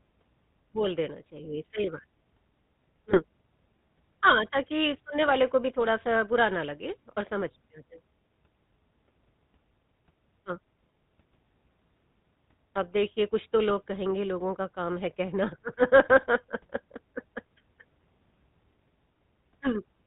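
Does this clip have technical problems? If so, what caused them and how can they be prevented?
Yes. The speech passes through the GSM full-rate codec throughout, which fits its 13 kbit/s mode. Pulse-driven excitation and no content above 4 kHz leave a plainly audible buzzy, gravelly roughness. To prevent it, carry the call over a wideband codec or a wired path.

From 3.10 to 3.24 s, GSM bit errors corrupted the decoder's parameters over what sounds like two frames, bending the spectrum into a brief squawk and gargle. To prevent them, keep the radio link strong or use stronger channel error protection.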